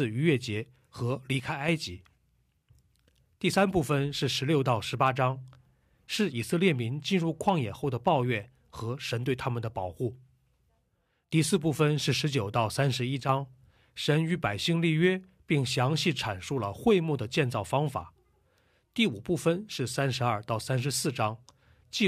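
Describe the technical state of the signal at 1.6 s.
One channel drops out from 1.40 to 1.68 s, so at 1.6 s the signal is in the middle of the gap. The speech suddenly sits about 6 dB lower for just under 0.3 s and then jumps back to its earlier level. The likely cause is one side of a stereo pair cutting out, leaving only the surviving channel to feed the mono sum. Material common to both sides loses half its contribution, and anything carried by the lost side alone vanishes for that stretch.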